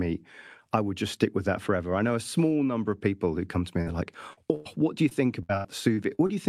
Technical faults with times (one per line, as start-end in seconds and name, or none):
3.81-3.95 burst of packet loss
4.33-4.39 short concealed packet loss
4.55-4.67 burst of packet loss
5.09-6.31 repeated packet loss (robotic sound)